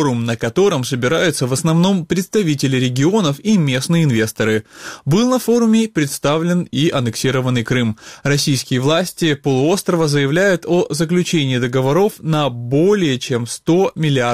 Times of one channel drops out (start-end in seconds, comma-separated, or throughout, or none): none